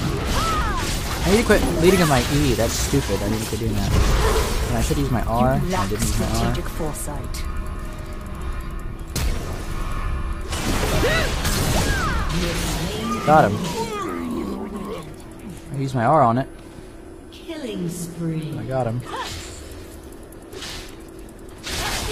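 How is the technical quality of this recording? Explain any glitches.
The quality drops partway through because of an adaptive stream at a lower bitrate. At 15.27 s the connection evidently slowed, and the player switched to a cheaper encoding for the rest of the clip. The sound points to a fall from roughly 96 kbit/s AAC to about 24 kbit/s HE-AAC. The top octave is now rebuilt synthetically and cut off above 14.9 kHz, so the treble turns hazy and metallic and codec artefacts rise. The change is abrupt, with no gap.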